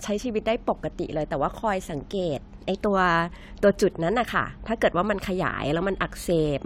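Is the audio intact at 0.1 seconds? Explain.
Yes, at 0.1 seconds the audio is intact, with no fault present at that moment.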